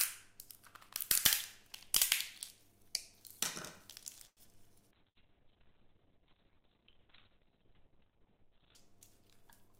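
At 4.27 s a packet arrives late and the jitter buffer runs dry. The receiver holds the last sound for about 94 ms, until 4.40 s, then carries on from the same point, so nothing is lost, but that moment lingers with a faint buzz, a short stall from a late packet.

From 4.96 s the call's bandwidth estimate collapses and the encoder is pushed from 48 to 7 kbps, staying at the lowest rate for about 3.75 s. Coarser coding and an audio bandwidth cut from 20 kHz to 4 kHz make the sound muffled and watery until 8.81 s. This is a call bitrate drop.

Inside that stretch, at 5.09 s, a burst of packet loss strikes: about 60 ms of audio never arrives. The receiver extends the last sound for about 61 ms while fading it, giving a brief held buzz or dying hiss, then jumps ahead at 5.18 s with that piece missing.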